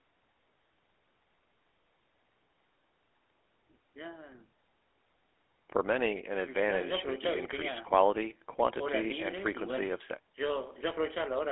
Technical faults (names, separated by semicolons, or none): GSM full-rate codec